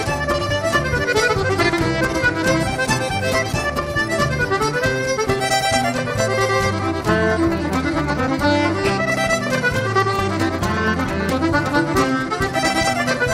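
From 0.14 s right through to 13.3 s there's a constant fine rattle of clock slip clicks, roughly twenty a second, so a few hundred over the run. It's most likely two devices on free-running clocks disagreeing by something like 400 ppm, with a single sample dropped or repeated each time the drift adds up. The ticks come so fast they blur into a soft buzz, most obvious where the sound is loud and sustained.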